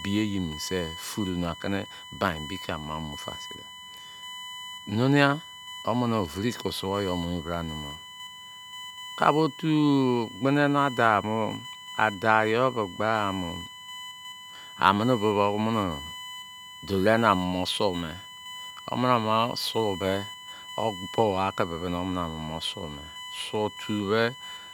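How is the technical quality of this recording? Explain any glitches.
The recording carries USB whine from start to finish, a steady fixed-pitch tone sitting under the speech at roughly 15 dB below it. The USB bus pulls current in 1 ms frames, and that 1 kHz rhythm leaks into the audio through shared power or ground. Here the fundamental is at 1 kHz, but the strongest component is its third harmonic at 3 kHz, so the whine sits high rather than low.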